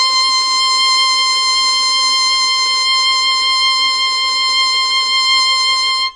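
From start to finish the music carries plainly audible damage of the kind that MP3 compression at a starved bitrate leaves behind, and that is the likely cause. Nothing remains above 9.8 kHz, so the treble sounds dulled, while sparse mid-band detail flickers in and out, giving a watery, swirly texture with metallic chirps on bright sounds and smeared attacks. A spectrogram shows a hard horizontal ceiling at 9.8 kHz and speckled, patchy gaps below it.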